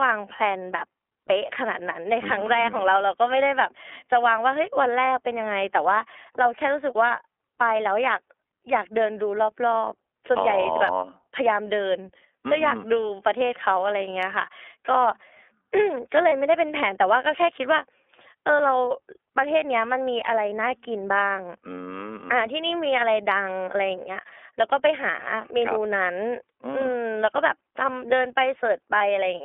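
The whole recording passes through the iLBC codec. Nothing above 4 kHz survives, and the band sits at roughly 300 Hz to 3.4 kHz. Each 30 ms frame is coded on its own. The speech sounds plainly rough and synthetic, which fits iLBC's 13.33 kbps mode.

At 16.29 s and again at 28.98 s, one iLBC frame is lost, about 30 ms each time. The decoder fills each gap by repeating the last pitch cycle with added noise. You hear a brief held, buzzy vowel, and then the speech recovers almost at once.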